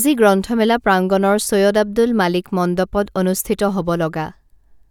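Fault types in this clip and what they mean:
No fault types are present in this clip.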